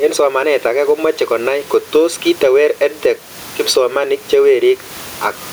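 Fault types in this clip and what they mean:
Gain pumping: throughout the speech, the gain swings by around 15 dB, pulling down on each loud syllable, with room noise about 32 dB below the speech, likely a fast limiter taming overdriven gain. Unlike a noise gate, the background never drops to silence.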